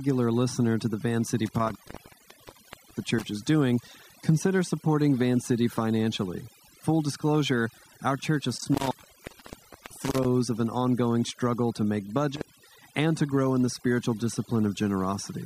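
Overdone noise removal runs through the whole speech clip: the reducer was set so hard that bands near its noise estimate were pulled down with quiet parts of the voice. It leaves near-silent, twinkling gaps; a spectrogram shows scattered isolated specks and ragged, holed speech harmonics.

An intermittent contact breaks the line three times, at 1.46 to 3.26 s, open about 1.21 s; 8.57 to 10.25 s, open about 1.00 s; and 12.35 to 12.68 s, open about 0.21 s. A loose connection drops the signal, leaving crackle at each edge, with sharp waveform spikes flanking flat stretches.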